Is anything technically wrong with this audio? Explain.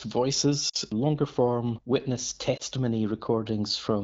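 Yes, there are lost AMR speech frames in two spots. Around 0.69 to 0.76 s, just before "longer form witness", a roughly 40 ms gap sounds like two dropped 20 ms frames. Then at 2.57 to 2.62 s, right after "longer form witness", about 20 ms goes missing, consistent with a single frame. Both times the frames failed their checksum, so the wideband decoder, running at 12.65 kbit/s, papered over the hole by repeating the last good pitch and vocal tract settings at a fading level. You hear the single frame as a quick dip or warble, while the two-frame gap drops to near silence, and the voice comes back weak or rough for a moment.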